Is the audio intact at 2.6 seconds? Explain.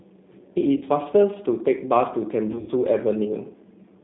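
No. From 2.52 to 2.72 s there is VoIP packet loss concealed by the speech codec. About 120 ms is missing across a 160 ms stretch, with the longest gap 80 ms. The decoder re-extrapolates its last pitch and filter at falling gain, giving a fading buzzy tone or coloured noise. It shows as smeared, repeated harmonics over a sagging waveform envelope. Underneath, the G.729 codec limits the band to 150 Hz–3.7 kHz, so the spectrogram is empty above 3.7 kHz and the sound is audibly rough and synthetic.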